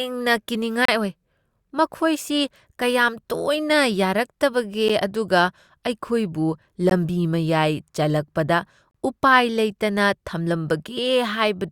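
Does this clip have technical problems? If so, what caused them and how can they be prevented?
Yes. There are gaps between stream segments: hard-edged silences at 0.85–0.89 s, 4.88 s, 6.90 s and 8.91–8.94 s, about 10 to 34 ms long. The segments' timestamps don't quite meet at these 2 s boundaries, so the player fills each gap with silence. Unlike a dropout, no speech is lost, and the sound resumes exactly where it stopped. Writing contiguous, gap-free segment timestamps prevents it.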